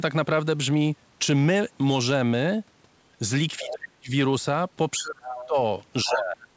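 A speech recording in which a second, quieter voice leaks through in short scraps at 3.58–3.71 s, 5.23–5.46 s, 6.05–6.16 s and 6.42–6.46 s, sitting roughly 10 to 25 dB below the main talker. This is the other side's voice leaking through, likely because an echo canceller left some loudspeaker sound in the microphone. On a spectrogram it shows as faint, separate harmonic traces overlapping the main voice. Alongside these, the main voice is pulled down in speech suppressed in double talk at 3.59–4.12 s, 5.0–5.57 s and 6.05–6.41 s. The first dip is the deepest at around 40 dB, the others shallower, with the stretches affected for about half a second, then about 0.4 s each. The waveform pinches to a thin trace there, and the spectrogram thins out. The band stops at 8 kHz throughout, which fits a G.722 call codec at 64 kbps.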